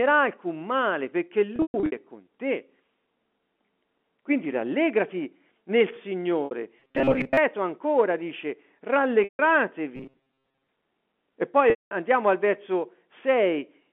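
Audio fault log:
1.56–1.92 s, 6.45–6.51 s, 9.24–9.39 s, 11.70–11.91 s: packet loss with pitch repetition. About 240 ms goes missing across the first 360 ms span (longest run 120 ms), then 60 ms, 150 ms and 210 ms, which fits packets of roughly 30 ms each. The receiver loops the last pitch period and fades it over about 50 ms. The brief 6.45 s gap sounds like a held, buzzy note. The longer gaps fade to silence, then the sound cross-fades back in.
6.80–7.37 s and 9.96–10.69 s: robotic sound from repeated short buffers. Within the 200 Hz to 3.4 kHz telephone band of the G.711 line, the speech turns into a rigid metallic buzz fixed at 134 Hz, still loosely tracking the original contour. Most of the real audio in these stretches is skipped, likely because new audio arrives too seldom and the software keeps replaying a fragment of about 7.5 ms, whose repetition rate sets that pitch.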